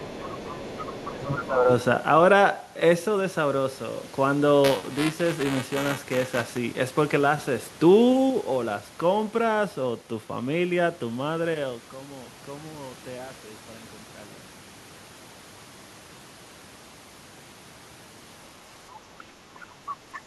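From 0.0 to 1.1 s a second, fainter voice sits about 15 dB under the speech. This is the other side's voice leaking through, most likely because the echo canceller left part of the loudspeaker signal in the microphone feed. It sounds secondary. At 0.17 to 0.34 s and again at 1.1 to 1.69 s the main speech dips by about 10 dB, then about 15 dB. That pattern is speech suppressed in double talk, likely the canceller turning down both voices while they overlap, so the talker fades or drops out for a moment. From 4.64 to 6.57 s buffer tearing gives a steady robotic buzz at 345 Hz, heard only while sound is present. It fits a 128-sample buffer in which roughly 7% of each period replays audio about 10 ms old, with a hard join on each side. Short leakage bursts return at 19.87 to 19.93 s, about 15 dB down, and at 20.13 to 20.2 s, about 20 dB down.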